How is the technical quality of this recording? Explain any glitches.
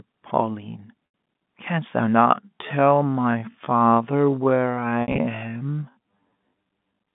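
The recording has two clear problems: brief dropouts on a telephone-band line (G.711 mu-law, roughly 150 Hz to 3.6 kHz), and a sudden slowdown partway through.

Packet loss with pitch repetition occurs at 1.06 to 1.14 s and again from 5.02 to 5.18 s. Each sounds like a briefly held, buzzy note fading into silence. The receiver lost audio, 80 ms first (which fits four 20 ms packets) and then 100 ms scattered across 160 ms with a longest gap of 60 ms, and bridged it by repeating the last pitch period.

A time-stretched section begins at 2.13 s and runs to the end. The pace drops to half speed while the pitch stays put, leaving the speech dragging. This is likely software stretching the audio to fill a length by repeating short pieces while keeping the pitch.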